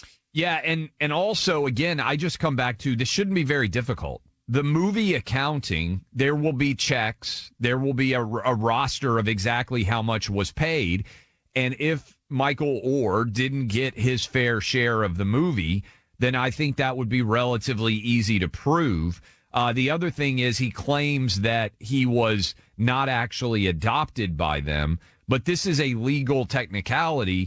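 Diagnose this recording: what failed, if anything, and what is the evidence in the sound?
The failure is clock drift between sender and receiver, at the buffer and network timing stage of the call path. The speech runs slightly slow and unsteady from start to finish. The sender's clock runs about 3 percent slower than the receiver's, so the jitter buffer keeps draining. The receiver has to fill the gap repeatedly, which leaves small, irregular timing hiccups across the whole clip.

The same slow clock triggers repeated timing corrections, running from 0.19 s to 27.38 s. The receiver keeps repeating short pieces, always in the stretching direction, so the speech plays at about 97 percent speed with slight uneven stutters rather than one obvious glitch. Altogether the corrections add something like 0.7 s. Above them, the wideband call codec, likely G.722, cuts everything above 8 kHz.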